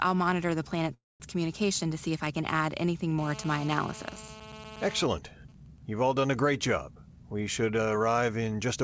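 At 0.94 s the speech stops and a brief buzzy continuation of the last sound fades into about 210 ms of silence before the audio resumes at 1.22 s. This is a call audio freeze. The likely cause is packets held up in transit so the jitter buffer ran dry. The receiver padded 261 ms and then carried on from where it stopped, so nothing is lost, but everything after it arrives 261 ms later.

From 3.18 s to 5.02 s a hard, raspy buzz sits on top of the speech at about 14 dB below it. This is GSM phone buzz. A 2G handset close by, active in a call, transmits in bursts at 217 Hz, and the audio circuitry rectifies those radio pulses into a tone rich in harmonics. It stays steady for the whole stretch and has no relation to the speech.

At 5.02 s the buzz changes into even ticks with a longer 217 Hz buzz twice a second, roughly 20 dB below the speech, lasting until 6.39 s. These are GSM signalling bursts. 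The same phone is still in a call, but its user has gone quiet, so it sends only sparse groups of bursts instead of continuous transmission. After rectification they come through as that rhythmic clicking pattern.

From 6.95 s to 8.77 s the speech runs noticeably fast, at about 111 % of normal rate, while the pitch stays where it was, giving a hurried delivery. This is jitter buffer speed-up. The buffer was holding more audio than its target, so the receiver repeatedly cut out short pitch-period-sized pieces to shrink the delay. It removed about a fifth of a second in total. Throughout the clip, the G.722 call path leaves nothing above 8 kHz.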